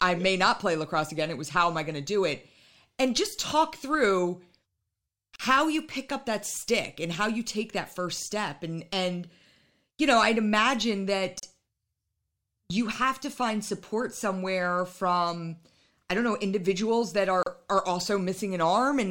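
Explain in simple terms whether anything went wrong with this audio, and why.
The speech drops out three times for a split second, at 5.36 s right before "how you pick up", at 11.40 s after "you know I'd imagine", and at 17.43 s after "don't know individuals that". Each time there is roughly 35 to 40 milliseconds of silence, about every 6 seconds. This is a gap at a join of encoded pieces. The recording was compressed in separate chunks that were stuck together without trimming the bits of silence each chunk carries at its edges.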